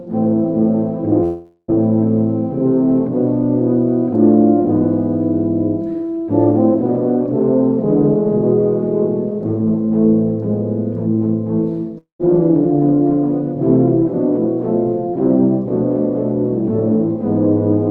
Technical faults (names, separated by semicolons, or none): long network dropout